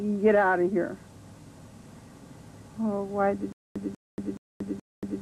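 From 3.52 s to the end, the sound falls into a stutter with silent gaps: a 192 ms fragment repeats four times, each followed by about 232 ms of digital silence, a 424 ms cycle. This is likely a stalled player re-sending its last buffer while the intended audio is lost.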